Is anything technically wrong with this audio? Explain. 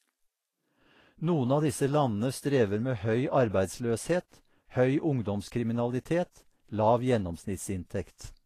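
Yes. Vorbis compression runs throughout: the likely cause is low-bitrate Vorbis coding, fitting about 34 kbps, which removes everything above 14.1 kHz and turns fine treble detail into hissy, grainy noise in the speech.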